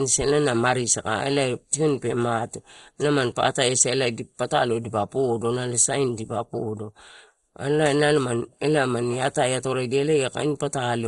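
Throughout the speech, the sound is dull and gurgling with a granular roughness, which fits heavy MP2 compression, likely at a low rate around 56 kbps. Starved upper sub-bands switch off. A spectrogram shows nothing above 11.2 kHz and flickering, blocky patches below it.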